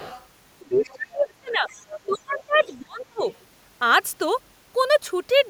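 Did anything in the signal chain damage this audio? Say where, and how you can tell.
Yes. The other side's voice leaks through at 0.0–0.26, 0.72–0.95, 1.7–2.18, 2.59–2.82 and 3.02–3.34 s, roughly 20 to 35 dB below the speech, likely residual echo the call-processing canceller missed.

Speech is suppressed in double talk from 0.69 to 1.69 s and 2.06 to 3.25 s, dipping around 30 dB, likely because the echo canceller ducked the talker along with the echo.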